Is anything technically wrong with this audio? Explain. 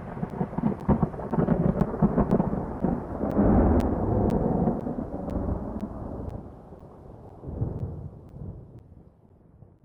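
Yes. Periodic USB or driver dropouts run from 0.3 s to 9.8 s, one every 0.5 s, about twenty in all. Each time, a blocked bus or driver loses roughly 10 ms of audio that is filled with silence, heard as evenly spaced ticks.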